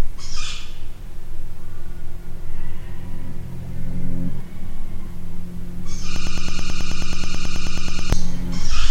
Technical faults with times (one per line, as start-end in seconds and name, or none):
6.16-8.13 broken-record loop